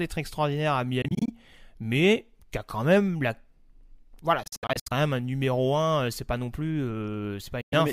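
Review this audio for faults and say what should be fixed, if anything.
Speech drops out in abrupt silent gaps at 1.02–1.30, 4.43–4.92 and 7.61–7.73 s, then resumes as if it had played on: likely Bluetooth dropout, with late packets discarded. Keep the headphones close to the source with a clear line of sight, away from other 2.4 GHz traffic.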